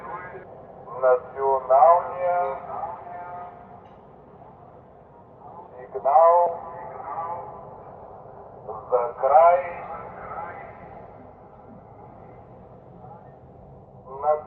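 A skip ahead occurs at 0.43 to 0.45 s: roughly a second and a half of sound is dropped while later audio is already queued. This happens either in transit or when an overflowing jitter buffer discards its backlog to catch up. Nothing fills the hole, so playback lurches forward and the material on either side is butted together with almost no gap. The splice passes through the call path, whose top end stops near 8 kHz, consistent with Opus at about 32 kbps.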